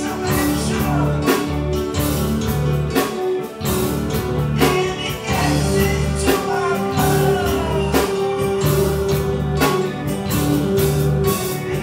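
No technical fault can be heard anywhere in this audio. Nothing in it calls for a time or a cause to be given.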